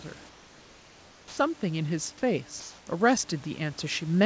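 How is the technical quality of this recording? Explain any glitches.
The recording has three kinds of glitch, all typical of a call link with discontinuous transmission and gain control. The audio carries nothing above 8 kHz, consistent with a wideband call codec such as G.722, and there is steady room noise about 28 dB below the speech.

Comfort noise in place of the background, 0.29 to 1.37 s and 2.60 to 2.87 s: during pauses the real room ambience gives way to a smooth, featureless hiss. The sender has likely stopped transmitting when its voice detector found no speech, and the receiver synthesises noise roughly matched to the background. The first stretch lasts about 1.1 s and sits about 6 dB quieter than the real ambience. The second lasts 0.27 s and is about 3 dB louder, so the background audibly steps down and then up.

Onset clipped by the voice detector, 1.28 to 1.37 s: speech resumes abruptly, missing its soft beginning. 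The detector was likely slow to register that sound had restarted, so the first 90 ms were never sent and comfort noise filled that gap. The result is a hard, chopped start to the first syllable after the long pause.

Automatic gain rising, 1.6 s to the end: speech and background swell together over the final two and a half seconds or so. The gain control judged the input too quiet and raised its gain gradually, so the noise floor climbs along with the speech.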